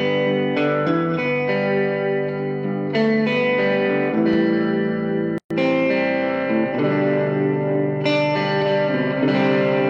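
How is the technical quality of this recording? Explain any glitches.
The recording has two distinct glitches about a second apart.

At 4.33 to 4.36 s there is a loud pop, a single sharp thump peaking a few decibels above the surrounding sound. The likely cause is a voltage pulse from a plug, switch or static entering the signal path. Unlike a dropout, the sound continues uninterrupted beneath the pop.

From 5.38 to 5.51 s there is a gap at a join of encoded pieces, a silence of about 125 ms. Separately encoded segments were joined without trimming the encoder's start delay and end padding. This differs from a dropout because the edges are smeared and the sound resumes exactly where it stopped, with nothing missing.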